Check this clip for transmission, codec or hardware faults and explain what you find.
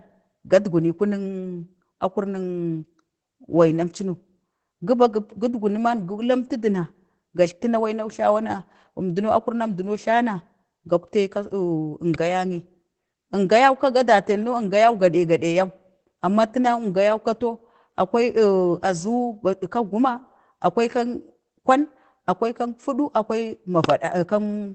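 Opus voice compression runs throughout the clip. The speech points to Opus's SILK linear-prediction mode at a low rate, about 12 kbit/s. Nothing is heard above roughly 8.7 kHz, and the coarsely coded excitation leaves voices plainly muffled, hoarse and slightly robotic.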